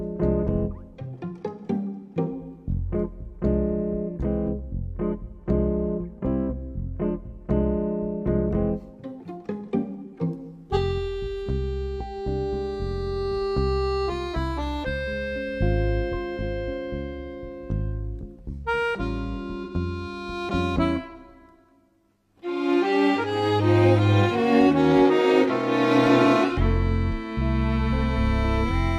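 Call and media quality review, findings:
Brief smeared, phasey patch in the audio from 19.63 to 19.75 s, about 85 ms long. AAC frame loss with concealment: the decoder rebuilt the gap from the last good spectrum with scrambled signs or interpolated energy. The length fits two lost AAC frames.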